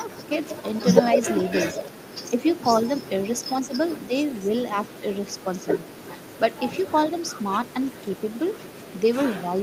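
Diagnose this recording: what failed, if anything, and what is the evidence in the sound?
A delayed copy of the speech, trailing it by 152 ms, runs through the recording. This is an echo leak in call processing. The copy is strongest from 0.43 to 1.91 s, at about 10 dB below the direct speech. It returns faintly from 2.5 to 3.07 s at about 25 dB down, then persists from 3.99 s to the end at about 30 dB down. The likely cause is a far-end loudspeaker whose echo canceller left residual pickup in the return path.

The speech dips in level twice, from 2.3 to 2.9 s and from 3.53 to 4.5 s. Each time it drops by roughly 5 dB in short pieces that add up to a fraction of a second. This pattern matches speech suppressed in double talk, also a call-processing fault. It likely comes from the echo canceller failing to separate the local talker from the loudspeaker echo while both sides were active, and attenuating both together.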